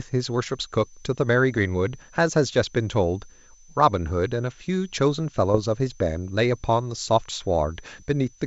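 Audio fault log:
Throughout: switching supply whistle, a thin high tone wandering between about 6.0 and 6.2 kHz, about 30 dB below the speech. A power supply is likely cycling in an audible burst mode. The pitch drifts, which separates it from the steady, toneless upper-band hiss of G.722.
1.52–1.59 s and 5.54–5.60 s: bit errors on an ADPCM link, each heard as a pop and a rough, grainy burst with a brief change in level. Flipped bits throw off the decoder's step size and predictor, so the damage rings on for some milliseconds rather than clicking once like a plain dropout.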